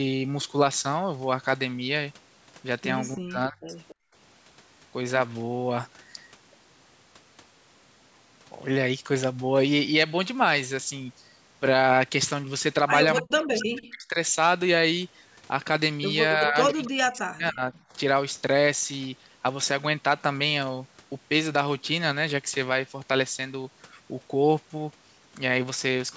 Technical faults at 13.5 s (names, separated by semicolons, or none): echo leak; speech suppressed in double talk